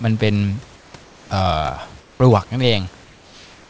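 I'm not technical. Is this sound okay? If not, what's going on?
No. There is comfort noise in place of the background at 0.76 to 0.94 s, 1.04 to 1.30 s, 2.00 to 2.20 s, and from 3.04 s to the end. In those pauses the real room hiss becomes a smooth, even, slightly quieter hiss. The likely cause is that the calling system stops sending sound when nobody is talking, and the receiving end fills each gap with artificial noise that only imitates the room.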